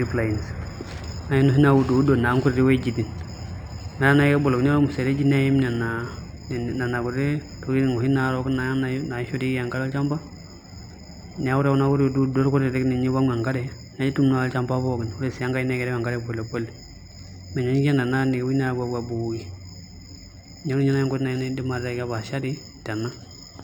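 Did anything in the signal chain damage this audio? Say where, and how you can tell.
Yes. Across the speech, sibilants carry a faint metallic shimmer and the top end sounds dulled. That is imaging from linear upsampling at rate conversion: straight-line interpolation from 12 kHz to 48 kHz filters weakly, leaving a mirrored copy at 6 to 12 kHz, roughly 30 dB down.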